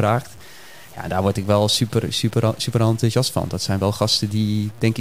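Speech, throughout which the signal was likely truncated to about 7 bits without dither, leaving grainy distortion that follows the sound, around 25 dB below it.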